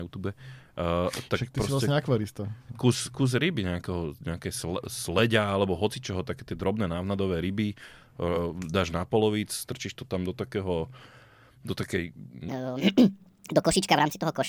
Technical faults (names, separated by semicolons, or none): wrong sample rate